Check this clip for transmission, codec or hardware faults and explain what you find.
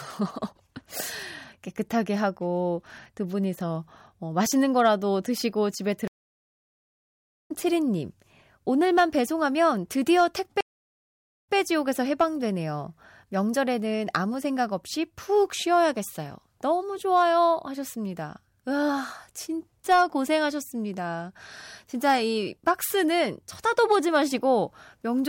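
Two stream reconnects interrupt the speech. At 6.08 s the connection drops and the player goes silent for 1.4 s, then a fresh decoder joins later in the live stream, so about one and a half seconds of material is skipped. At 10.61 s a 0.82 s silence ends with playback resuming 0.13 s earlier, replaying a short stretch of the speech. On a waveform each shows as a flat gap with a sudden jump in content. On a spectrogram it is a blank vertical band.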